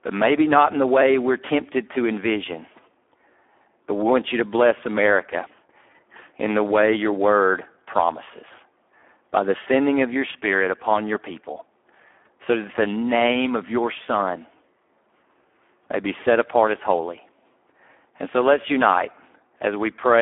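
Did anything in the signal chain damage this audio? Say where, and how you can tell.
Yes, at the codec stage: Speex codec damage runs through the whole clip. The speech sounds hoarse and buzzy, with thin excitation that points to a low bitrate near 8 kbps. It is confined to about 200 Hz–3.4 kHz, with nothing above 3.8 kHz. A plain telephone band-limit would stay clean, not rough.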